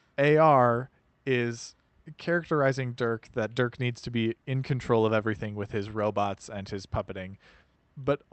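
Speech clip with short concealed packet loss from 3.53 to 3.57 s, just before "needs to be in": about 20 ms of audio never arrived, so the receiver extended the preceding sound to fill the gap and then blended back. On a spectrogram this appears as a brief smeared patch that repeats what came before, either continued harmonics or shaped noise, in place of a fresh onset.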